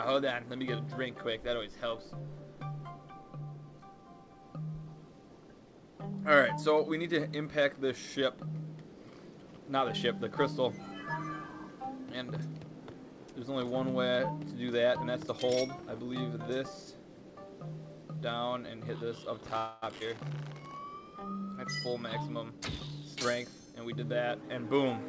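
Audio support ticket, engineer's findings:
Call audio freeze, 19.58–19.84 s. Likely cause: delayed packets drained the jitter buffer, so the receiver extended the last sound as a fading fill for 0.24 s. Playback then resumed where it stopped: a gap inserted, nothing lost.

Skip ahead, 20.00–20.02 s. Audio dropped, in transit or by the jitter buffer, while later packets were waiting. Roughly 70 ms of sound gone, and the two sides are butted together with almost no gap, heard as an abrupt jump forward.

Jitter buffer speed-up, 21.88–23.96 s. Buffer overfilled after a backlog and trimmed repeated pitch-period slices, around a fifth of a second in total, to cut latency. Sound runs at 108% speed with unchanged pitch, noticeably hurried.

The call path, which fits G.722 at 64 kbps, carries nothing above 8 kHz.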